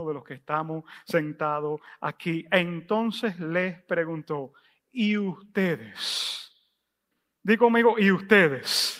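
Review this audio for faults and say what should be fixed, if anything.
Nothing to fix: no faults heard anywhere in the recording.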